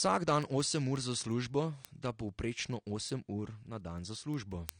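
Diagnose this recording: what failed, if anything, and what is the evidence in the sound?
AAC compression runs through the whole speech clip: the sound is dull and smeared, with a fizzy, warbling texture on sibilants and sustained vowels. The likely cause is a lossy codec stage at a low rate, which fits AAC-LC near 32 kbps discarding high bands and spectral detail.

Word clock ticks appear from 0.25 s to 4.69 s: around thirty sharp ticks of uneven strength, roughly every fifth of a second. At the converter or digital link, an unlocked receiver clock drifts against the sender's by around 150 ppm, slipping one sample at each crossing.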